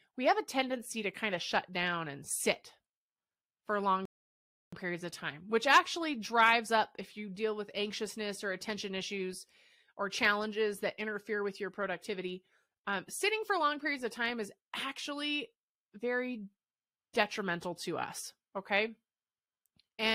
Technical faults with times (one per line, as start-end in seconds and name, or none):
4.05-4.73 rebuffering stall